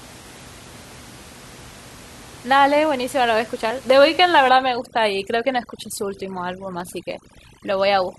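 At 3.90 s a block of digital silence cuts in. About 2 ms drops out with no fade, so it sounds as a sharp tick.

From 4.49 s to the end, overdone noise removal sets in. The room noise, about 22 dB below the speech, drops and breaks up into twinkling specks.

At 6.80 s the same 2 ms block of digital silence returns as another tick.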